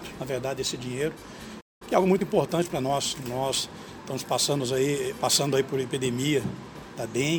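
At 1.60 s the player likely ran dry of buffered data, causing a playback stall: the sound cuts to silence for about 0.2 s before resuming at 1.82 s. Time-compressed catch-up follows as the player trims its backlog with small cross-faded cuts, so from 1.82 to 3.14 s the audio runs hurried at 1.15 times speed, pitch unchanged.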